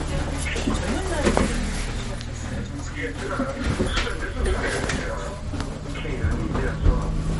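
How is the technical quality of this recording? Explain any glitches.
The recording carries plainly audible compression damage from start to finish, most likely MP3 compression. Nothing is present above 11.2 kHz, a hard treble cut-off of the kind an encoder imposes when bits are scarce, and the damage level fits a low bitrate of around 48 kbps. At that rate weak frequency components are zeroed and then restored from frame to frame, so the sound takes on a watery, swirling texture, with dull top end and smeared attacks.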